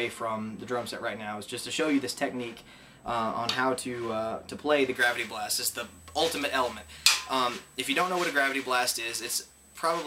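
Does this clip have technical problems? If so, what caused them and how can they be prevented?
Yes. From 4.95 s to the end, pre-emphasis is left on. The J.17 treble boost was never undone, so 10 kHz sits about 11 dB above 1 kHz, sounding thin and sibilant. Prevent it by applying the matching de-emphasis at decoding.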